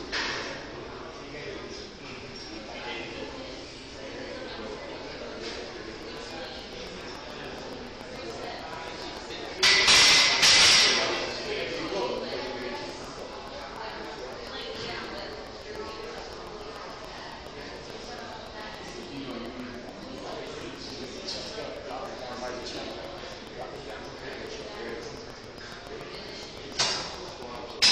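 From 6.03 to 27.85 s, a train of clicks ticks regularly at 7 per second, likely interference: evenly spaced spikes and spectrogram lines.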